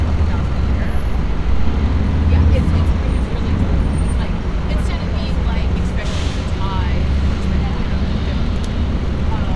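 Nothing goes wrong in this recording of sounds; it just carries on as it should, with no technical faults to speak of.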